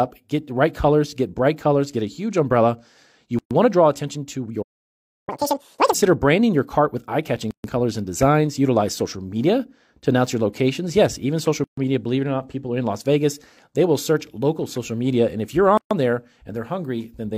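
At 3.39 s the sound drops out for about 121 ms and then resumes exactly where it left off. This is a gap at a join of encoded pieces. The audio was encoded in separate pieces and joined without trimming. Each encoder pass leaves its start-up silence and the padding of its last frame in place. The edges are abrupt but slightly smeared by the codec.

From 4.62 s to 5.29 s the output goes silent for about 650 ms. This is a playback stall. The sound halts mid-flow and then picks up again. The player most likely ran short of data or had its thread blocked until it recovered.

Catch-up at higher speed follows from 5.29 s to 5.94 s. The player runs its backlog at twice normal speed by resampling, so the pitch jumps by about ten semitones. That recovers the lost time. Speed and pitch then fall back to normal.

More join gaps come at 7.51 s, 11.64 s and 15.77 s, each about 133 ms long. With the first gap, they recur every 4.0 s. 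That spacing points to pieces of equal length. Every piece brings its own encoder delay and end padding to the join, so each one opens the same short hole in continuous sound.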